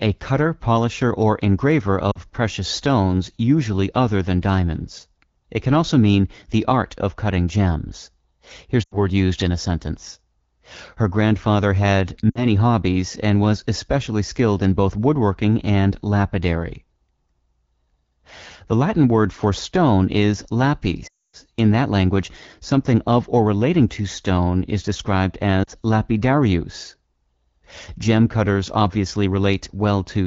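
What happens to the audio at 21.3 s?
Lost AMR speech frames from 21.07 to 21.36 s: the wideband decoder repeats the last good frame with falling gain, leaving a waveform and spectrogram gap of near silence.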